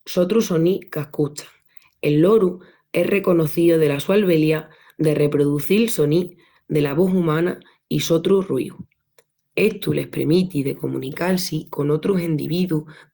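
Nothing here trips any alarms, so there's no fault to point to anywhere in this recording.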